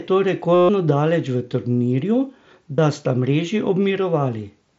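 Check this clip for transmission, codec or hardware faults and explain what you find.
There are two dropouts of concealed Bluetooth headset packet loss. The first runs from 0.54 to 0.69 s, just before "daleč v turnirju". The second runs from 2.76 to 2.78 s, just after it. Packets between headset and phone went missing, and the receiver filled each gap by repeating the best-matching recent stretch of waveform. The long first gap becomes a buzzy, full-level held tone with a slight warble as real speech resumes. The wideband mSBC link carries the speech with light graininess.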